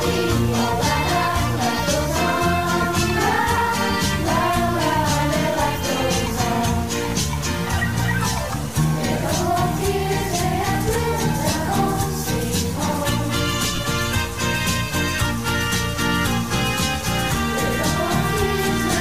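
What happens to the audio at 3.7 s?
At 3.7 s the sound carries the same grainy or buzzy distortion heard throughout the clip, most likely from a stuck bit: one data bit held fixed shifts about half the sample values by its weight. On a waveform the trace shows fixed-size steps; a spectrogram shows broadband hash, including in quiet gaps.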